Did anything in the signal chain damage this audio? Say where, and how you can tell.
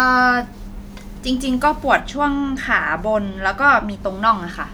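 Yes. From 0.0 to 2.0 s the speech sounds thin, bright and hissy, with sibilants that spit, and then the tonal balance settles. This is pre-emphasis left on. The treble lift matches the CD 50/15 µs curve, about 8 dB up at 10 kHz relative to 1 kHz. The boost was applied at encoding, but the playback or conversion stage never applied the matching de-emphasis cut for that first stretch, so the treble reaches the listener uncorrected.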